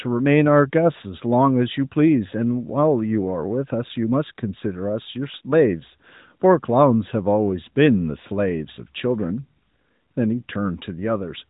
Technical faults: none

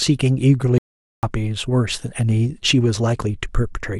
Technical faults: audio dropout to silence

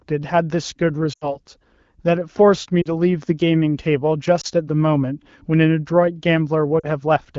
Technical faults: lost AMR speech frames

